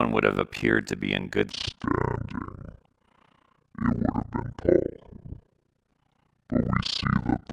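Throughout there's overlap-add ripple: badly overlapped frames make the level dip about 60 dB around 50 times a second, giving a robotic flutter. From 1.51 s, after "to be in good", there's a section at the wrong speed. It plays at 0.598x to the end, about ten semitones deep and sluggish, likely clocked wrong.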